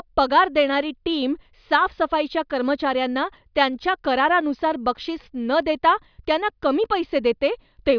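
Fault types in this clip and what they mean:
Nothing stood out on listening to this speech recording.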